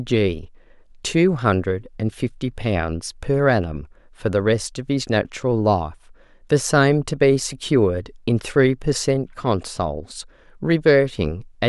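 Nothing in the recording stood out as a technical problem when listening to it.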